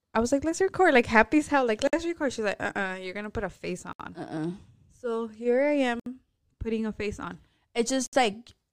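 The speech was encoded in separate pieces about 2.0 s long and joined without trimming each encoder's start-up delay and final-frame padding, leaving a gap at each join of encoded pieces. Silence cuts the sound at 1.87 s after "hell like" (about 56 ms), 3.93 s after "gonna put a face" (67 ms), 6.00 s between "here I" and "putting a face on" (67 ms), and 8.06 s (67 ms). Each dropout has edges smeared by the codec before the speech resumes where it stopped.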